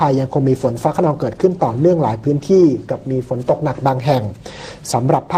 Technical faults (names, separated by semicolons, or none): none